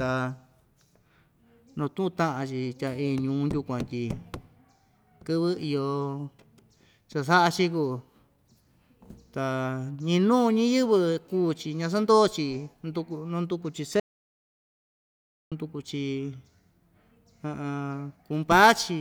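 At 14.00 s the speech cuts off abruptly and the clip falls into total silence, with no room tone or background hiss at all, until the speech resumes mid-flow at 15.52 s. This is an audio dropout to silence lasting about 1.52 s, and anything said during that stretch is lost. The dead-digital quality of the gap points to the input signal disappearing, likely through a disconnected device, a failed link or an accidental mute, while recording carried on writing silence.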